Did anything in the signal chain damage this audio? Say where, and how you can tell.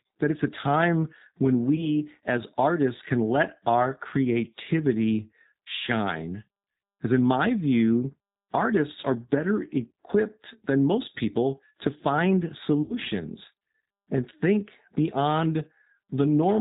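Yes. The G.729 codec, at the codec stage, runs through the whole speech clip at 8 kbit/s with plainly audible damage: nothing above 4 kHz survives, and the voice sounds rough and synthetic because it is rebuilt from a vocal tract filter and a few pulses per frame.

VoIP packet loss concealed by the speech codec, a network fault, occurs at 1.76 to 1.90 s after "it's a time when", at 9.01 to 9.04 s after "in my view artists", and at 12.82 to 12.94 s after "most people to find". The first two gaps are 20 ms each and the last is 80 ms. The decoder stretches its last pitch and filter into a buzzy tone or coloured noise that fades, and the voice stays weak briefly afterwards.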